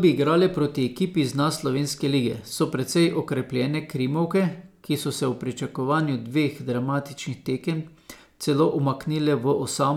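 Nothing's wrong here: it's a short bit of speech, and there's nothing technical to flag anywhere in it.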